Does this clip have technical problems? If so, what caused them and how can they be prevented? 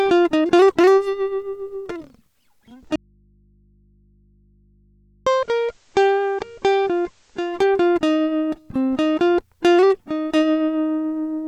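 Yes. At 2.70 s the music goes through a digital radio blend to analogue. The receiver lost its digital signal and faded over about 0.49 s to the FM broadcast. Level falls about 3 dB, and hiss sits around 40 dB down until 7.82 s. Better aerial placement or stronger digital reception prevents this.

From 2.96 s to 5.27 s there is an audio dropout to a faint residue. The music cuts out abruptly for 2.31 s, leaving only mains hum roughly 35 dB below it. The likely cause is a broken connection upstream while the input stayed live. Secure cabling and monitored inputs prevent this.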